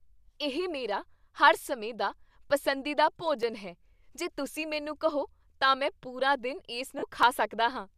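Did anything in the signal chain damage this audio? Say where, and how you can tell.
Yes. At the driver or buffer stage there are two blocks of digital silence, at 3.43 s and 7.23 s. Each is a hole of about 2.7 ms, short enough to be heard as a tick or dip rather than silence, which fits a 128-sample buffer left unfilled when its deadline passed. The audio drops straight to silence and snaps back with no fade, which is what separates it from a concealed packet loss. Concealment would fill the gap with smeared sound, not true silence.

Between 6.99 and 7.03 s, lost LE Audio frames occur on the Bluetooth link, spanning about 37.5 ms, which points to five consecutive 7.5 ms frames going missing. Here the signal does not go to zero. The LC3 decoder keeps repeating the last spectrum with scrambled phases, so the tonal parts of the speech turn into a short noisy smear rather than a clean hole. 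The light, slightly grainy top end is likely from the LC3 codec itself.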